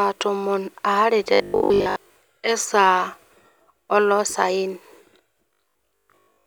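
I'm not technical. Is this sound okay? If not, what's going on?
No. From 1.34 to 2.16 s and again from 5.53 to 6.45 s, the speech turns into a stiff metallic buzz at 50 Hz: robotic sound from repeated short buffers, likely from audio arriving late and most of it being filled by replaying 20 ms snippets.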